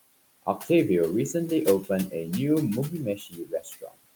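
A noise suppressor running through this speech recording is pulling down whatever it judges to be steady background by about 20 dB, deciding band by band and frame by frame. The room noise, sitting about 15 dB below the speech, therefore dips away in the pauses and swells back up under each phrase. These are noise suppressor artifacts. Between 2.9 and 3.98 s the same suppressor misreads part of the speech itself as noise. The gain it applies there drops as far as about 21 dB, and roughly 0.7 s of that stretch is affected in total. Quieter consonants and word tails are pushed down along with the background, so the speech in that span sounds swallowed and faint. This is speech cut by the noise suppressor.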